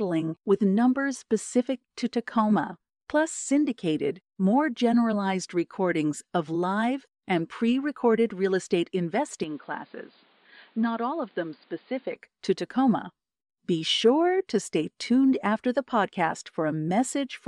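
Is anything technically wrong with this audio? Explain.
Yes. From 9.44 to 12.16 s, right after "pre recorded real estate", the speech abruptly turns dull and boxy, then opens up again, which points to an input switched to a poorer device, likely a different microphone or a headset's call profile. That device passes nothing above 4.8 kHz, drops the level slightly, and adds its own faint noise floor, with no gap at either switch. A spectrogram shows the upper band vanishing as a flat ceiling; the waveform shrinks a little.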